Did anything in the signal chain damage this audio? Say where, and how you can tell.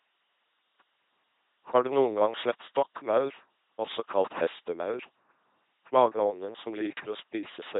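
Yes. The codec stage did it: this speech runs through an LPC-10 vocoder for the whole clip. It has that buzzy robot sound, with each moment excited by either a pulse train or noise, so voicing errors show up as buzz or hiss. Nothing lands above about 3.8 kHz, which fits a 2.4 kbit/s setting.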